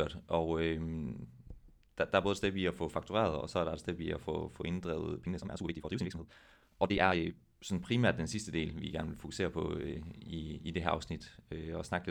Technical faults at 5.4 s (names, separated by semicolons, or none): time-stretched section